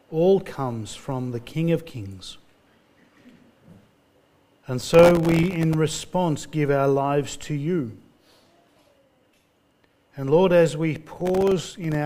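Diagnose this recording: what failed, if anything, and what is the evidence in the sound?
Processor overload crackle at the driver/buffer stage, 4.80–5.75 s and 11.17–11.95 s: dense runs of tiny silent gaps, fitting buffers around 1.5 ms, unlike longer, sparser network dropouts.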